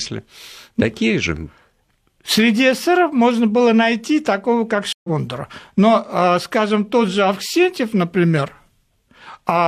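At 4.93 s, after "было найти такого как", a stream reconnect: 114 ms of silence, then the speech resumes roughly a tenth of a second further on, unlike a plain dropout.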